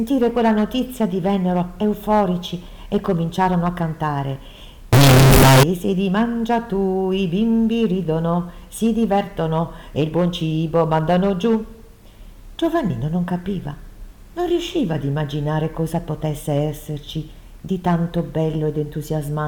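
From 4.93 to 5.63 s the audio turns into a harsh, near-square blast at an almost fixed, high level, likely float read as integer, with 32-bit float samples taken as 32-bit integers. Unlike ordinary clipping, quiet background noise jumps to the same level, though pitch stays traceable.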